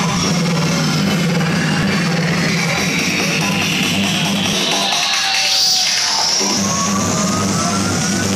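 Brief chirps or blips break in at 0.16, 2.49, 4.53 and 6.57 s: damaged data in a compressed stream, where corrupted frames make the decoder misread them and lose sync.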